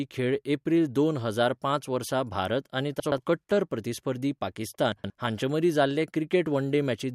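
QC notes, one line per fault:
3.00–3.18 s, chunks out of order: just after "पांच वर्सा भारत आनी", a 60 ms slice of the speech plays two slots late, after the two chunks that should have followed it. Nothing is missing, but the segment is shuffled, so the syllables just before "कट्टर प्रतिस्पर्धी" come out jumbled. Each hard join between the misplaced pieces has no crossfade, which gives three hard joins in under a fifth of a second.
4.92–5.10 s, chunks out of order: the same fault again, just before "हांचे मदीं जाल्ले". A 60 ms chunk is delayed by two positions and plays after its successors. The audio inside the 0.18 s span is reordered rather than lost, so there is a brief garbled moment, and there are three abrupt seams where the chunks meet.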